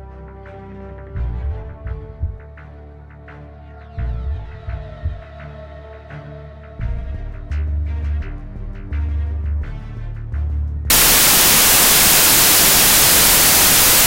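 From 10.90 s to the end at 14.07 s the audio shows a wrong sample width fault: data written as 32-bit integers are read as 16-bit integers. Each real sample splits into two values, one built from its low-order bytes, so loud noise swamps the signal. The doubled sample count plays back at 0.5x speed, an octave lower, with the original buried underneath. On a spectrogram, broadband noise fills the band. The waveform becomes a dense, noise-like block.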